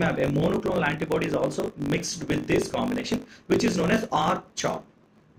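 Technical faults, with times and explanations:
Throughout: block size mismatch (truncated), each block's tail dropped, giving a 50 Hz buzz and 1.07x faster audio, fitting 1024-sample written blocks.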